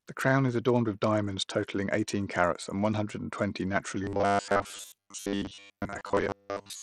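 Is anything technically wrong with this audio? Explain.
Yes. Throughout the speech the treble is dull and flickering, with a gritty grain and aliased hash, which sounds like Bluetooth SBC compression, likely at a low bit pool around 80 kbps: the weak upper sub-bands get few or no bits and the rest are quantised coarsely.

From 4.04 s, right after "hundred and twenty naturally," to the end, the voice becomes a rigid metallic buzz at a fixed 100 Hz that only loosely tracks the speech. This robotic sound likely comes from repeated short buffers: with fresh audio arriving too rarely, a 10 ms chunk is replayed to fill the gaps, and most of the real audio is skipped.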